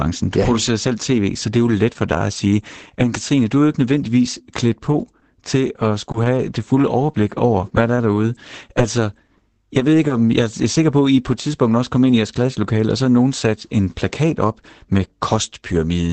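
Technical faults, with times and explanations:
4.37 to 10.22 s, scattered short gaps: About seven brief dropouts, none much longer than 20 ms, are spread through this stretch. Lost or late packets left small holes. The receiver filled each by extending the sound before it, leaving quick ticks and smears.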